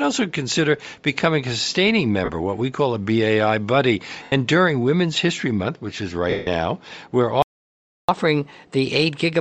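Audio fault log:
Throughout: Bluetooth LC3 compression. The speech has a plainly audible breathy, grainy edge, and the upper spectrum sounds hollow and filled with hiss rather than real detail. This is likely LC3 coding at a low rate, which fits about 32 kbps with 10 ms frames. At that rate the encoder drops much of the high band and the decoder fills the gap with noise, giving the grainy texture.
2.25–2.30 s, 4.23–4.32 s, 6.30–6.47 s: lost LE Audio frames. The gaps last about 30 ms, 90 ms and 170 ms. The first falls just after "consider becoming a sustaining" and before "what we call a", and the third just after "which is". In each gap the decoder keeps replaying the last good spectrum with scrambled phase, so the sound turns into a noisy smear. In the longer losses that smear fades toward silence before the signal returns.
7.42–8.09 s: playback stall. The speech cuts off mid-flow and the output goes silent for about 0.66 s, then resumes. 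A dropout of this kind, with clean silence rather than smeared noise, is likely the player running out of buffered data or its audio thread being blocked. Output simply halts until data flows again, so the silence is clean.
8.09–9.41 s: catch-up at higher speed. Right after the stall, the speech runs about 1.1 times faster and sits roughly one and a half semitones higher to the end of the clip. The player is resampling its backlog to win back the lost time. Because speed and pitch are tied together in resampling, the speech sounds both hurried and slightly raised until playback catches up.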